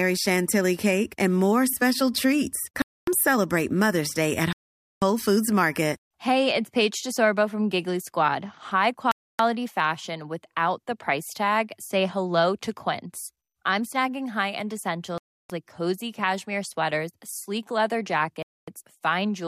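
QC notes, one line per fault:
2.82–3.08 s, 4.53–5.02 s, 9.11–9.40 s, 15.18–15.50 s, 18.43–18.68 s: Bluetooth stall. The speech cuts abruptly to full silence for 250 to 490 ms, then resumes abruptly, with no garbling or fade between. This is likely an empty receiver buffer waiting on delayed packets.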